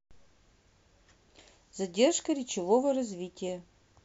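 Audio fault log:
No technical fault can be heard anywhere in the speech; the signal holds steady and continuous across the whole recording.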